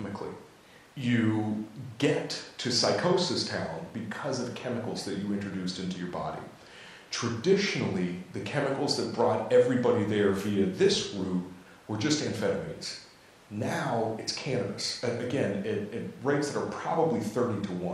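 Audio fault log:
No faults found in this speech recording.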